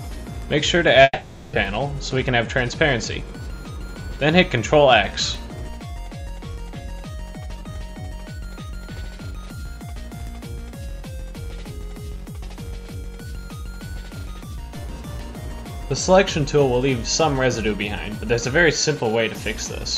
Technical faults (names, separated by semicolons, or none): long network dropout